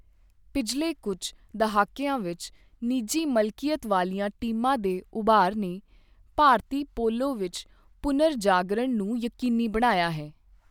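Nothing in the recording points to a technical fault; the speech signal is continuous and intact, with no dropouts, distortion or interruptions to be heard.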